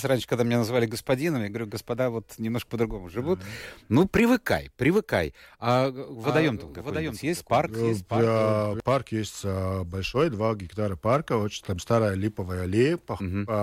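From 6.24 to 8.8 s the speech is doubled: a second full-band copy trails about 0.7 s behind, roughly 10 dB quieter, dry, starting and stopping abruptly, likely from a duplicated capture path.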